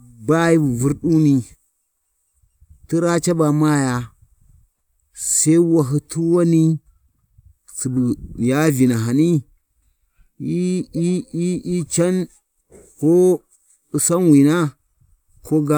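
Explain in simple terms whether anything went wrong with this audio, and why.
Nothing went wrong with this audio; there are no faults to hear anywhere in the speech.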